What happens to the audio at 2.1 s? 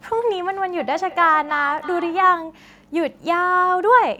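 At 2.1 s you're in feedback echo between two devices (0.76 to 2.43 s): a second device replays the speech into the mic, repeating about every third of a second, about 15 dB down.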